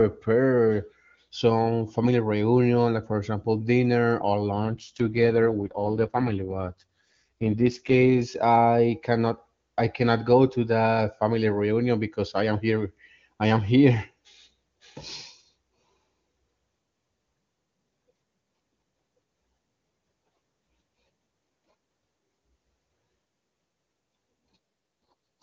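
Just after "for example dinner or", at 4.56 s, there's an AMR rate drop. The codec gets pushed down to what sounds like its lowest wideband mode, about 6.6 kbit/s, so the speech turns rough, raspy and synthetic until 8.21 s. There's no gap and no narrowing of the band, just grittier coding. It happens again from 25.1 s to the very end. Around both stretches the HD Voice runs at 23.85 kbit/s and is clean.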